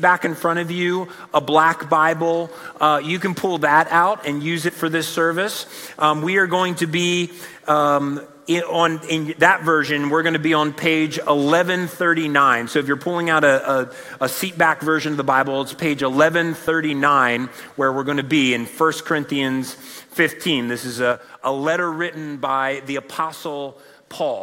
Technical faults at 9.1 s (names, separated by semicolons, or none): none